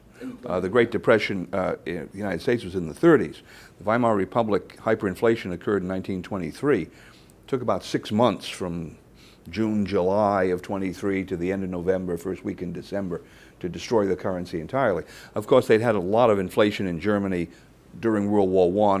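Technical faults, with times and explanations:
No technical faults detected across the clip.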